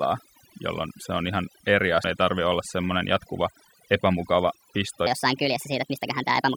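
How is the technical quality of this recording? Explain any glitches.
The recording has three technical faults: heavy noise-reduction processing throughout, a disc skip near the start, and a speed error at the end.

Overdone noise removal runs through the whole clip. A noise-reduction stage set far too aggressively has pulled individual frequency bands down or out whenever they sit near its noise estimate, taking low-level speech detail with them. The background drops and breaks up into twinkling artefacts.

A CD skip occurs at 2.04 s. The laser jumped to a different turn of the disc spiral, so playback mutes very briefly and resumes from another point. It is heard as a small tick followed by an abrupt discontinuity where the speech jumps position.

A section at the wrong speed runs from 5.07 s to the end. This stretch plays 1.42 times faster than recorded, raising pitch by about seven semitones along with the tempo. 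The likely cause is that this portion was clocked at the wrong rate, leaving the speech high-pitched and hurried.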